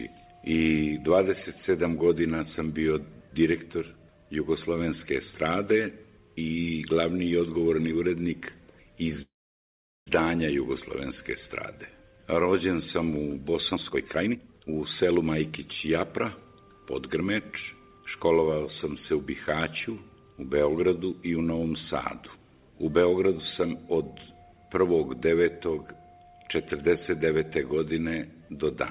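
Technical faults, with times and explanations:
9.22–10.09 s, call audio freeze: the sound stalls for about 0.85 s. A brief continuation of the last sound fades away, leaving roughly 0.77 s of silence before the audio resumes exactly where it stopped. Nothing is lost. Instead, a gap is inserted, which adds 845 ms of delay. The likely cause is packets held up in transit, which let the jitter buffer run dry so the receiver had nothing new to play.
13.74–15.69 s, jitter buffer speed-up: the audio rushes along at about 142% of its normal rate while keeping its pitch, so it sounds hurried rather than raised. Holding more audio than its target, the receiver cut out many short pitch-period-length slices in succession, discarding around 0.7 s in total to bring the buffer back toward its target. The narrowband G.711 path, with nothing above 4 kHz, carries these trimmed segments.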